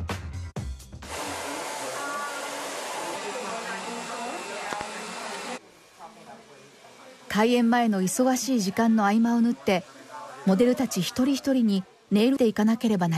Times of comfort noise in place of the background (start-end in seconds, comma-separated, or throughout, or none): none